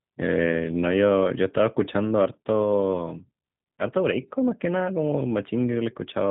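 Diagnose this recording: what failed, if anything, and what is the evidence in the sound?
The codec stage failed: the speech carries G.729 codec damage from start to finish. The band stops dead at about 3.8 kHz, and the voice has the plainly audible rough, slightly synthetic grain of a low-rate coder. That grain comes from rebuilding each 10 ms frame from a vocal tract filter, a pitch predictor and a handful of pulses rather than from the waveform itself, which fits a narrowband 8 kbit/s G.729A stream.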